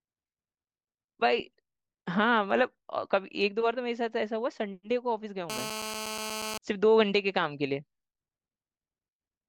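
From 5.50 s to 6.58 s a GSM phone buzz cuts across the speech: a harsh, rasping drone at about 217 Hz with no relation to the talker's pitch. A nearby 2G handset on a call was transmitting in timed bursts, and the audio circuitry rectified those radio pulses into sound. Held steady for just over a second at about 8 dB below the speech, it shows on a spectrogram as a dense ladder of evenly spaced harmonic lines, and on the waveform as a regular pulse train.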